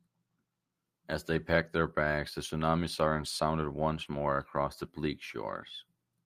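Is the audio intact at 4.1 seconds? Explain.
No, not quite. Just before that point, from 4.03 to 4.07 s, the speech briefly smears and wobbles before settling. This is short concealed packet loss. About 20 ms of audio never arrived in time, so the receiver bridged the hole with roughly 21 ms of sound extrapolated from what came just before, carrying on its pitch or its noise character, then crossfaded back into the real signal.

Overlapping the tail of that, from 4.05 to 4.07 s, the sound turns rougher and noisier for a moment. This is a lost packet rebuilt from error correction. A single 20 ms packet went missing, but the packet after it carried a low-bitrate backup copy. The decoder played that coarser copy instead of leaving a gap, so the audio stays continuous while briefly losing detail.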